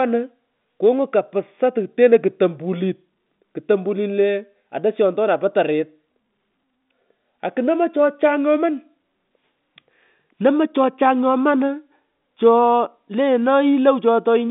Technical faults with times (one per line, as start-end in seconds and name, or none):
none